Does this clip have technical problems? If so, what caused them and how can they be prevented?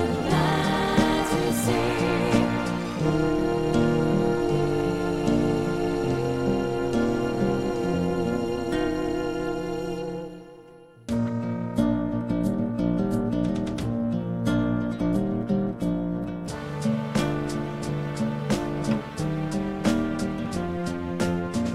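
Yes. Throughout the clip there is overlap-add ripple: the level pulses by about 11 dB roughly 300 times a second, giving a metallic buzz. It comes from windowed frames recombined with an overlap whose gains don't sum evenly. Unlike a slow tremolo effect, it runs at the frame rate and never changes speed. To prevent it, pair window shape and hop size so overlapping windows sum to a constant gain.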